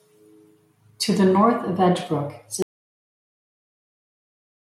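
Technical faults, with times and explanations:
2.62 s to the end: audio dropout to silence. The speech cuts off mid-flow and everything after it is silence, with no room tone, hiss or background left underneath, so the gap sounds completely dead and nothing is heard again before the clip ends. The likely cause is a lost input, such as a disconnected device, a failed link or a stray mute, while recording carried on writing silence. Whatever was spoken in that stretch is gone.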